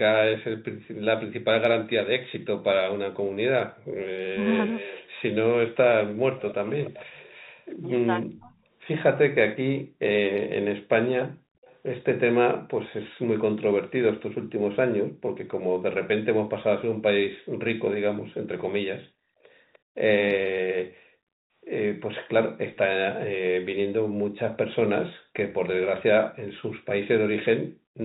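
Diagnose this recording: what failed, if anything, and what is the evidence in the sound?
Call processing, echo canceller: the canceller clamped the microphone hard while the far end was playing, so the room background drops out by about 38 to 39 dB and then returns. This happens at 3.73–3.98 s, 9.84–11.64 s, 15.06–17.53 s, 20.99–21.54 s and 27.67–28.0 s. Within each window the gating lasts only a fraction of a second, and the ambience dips away before coming back. That is background gated by the echo canceller.

Call processing, double talk: when both sides spoke at once, the canceller most likely could not tell the local talker from loudspeaker echo and suppressed both. The talker's speech dips sharply, by roughly 30 to 40 dB, at 4.3–4.46 s, 8.02–8.55 s and 20.32–20.52 s. The longest cut, around 8.0–8.5 s, lasts a few tenths of a second. The pattern of brief holes that coincide with overlapping talk points to speech suppressed in double talk.

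Call processing, echo leak: residual loudspeaker pickup got past the canceller and was sent back, likely from the far end's speakerphone. From 4.66 to 12.18 s and again from 19.73 to 25.69 s, a faint copy of the speech trails the original by about 300 ms, sitting roughly 20 dB below it. That constant delay identifies it as echo leak rather than room reverberation. It rides over the G.711 path's band-limit, which leaves nothing above 4 kHz.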